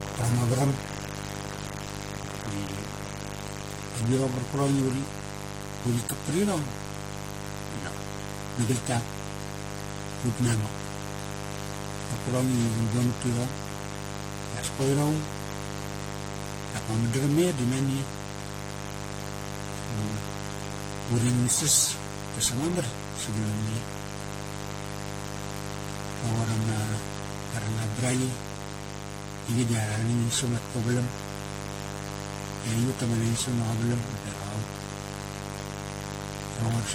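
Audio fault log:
Throughout, mains buzz: a steady, raspy 50 Hz buzz sits only around ten decibels under the speech. Switching spikes twice per mains cycle spray harmonics upward. A spectrogram shows an evenly spaced comb of horizontal lines reaching several kilohertz, and the waveform carries a sharp 100 Hz ripple.
Throughout, generation loss: the speech sounds swirly, smeared and hollow, with soft, blurred consonant onsets and nothing above 16.6 kHz. This likely comes from around seven rounds of re-encoding with a lossy codec resembling 64 kbit/s AAC, each on a shifted frame grid. A spectrogram shows patchy holes and a hard ceiling.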